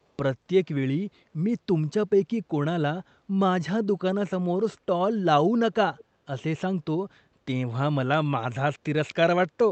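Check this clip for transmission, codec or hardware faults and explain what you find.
One fault stands out: a brief echo leak, heard over a call path whose audio tops out near 8 kHz, consistent with an Opus-type call codec.

From 5.97 to 6.04 s, a faint, delayed copy of the speech surfaces, lagging the original by about 338 ms and sitting far below it. The likely cause is a far-end loudspeaker whose echo canceller let a scrap of picked-up audio through and send it back. It is short, a ghostly repeat rather than a sustained echo.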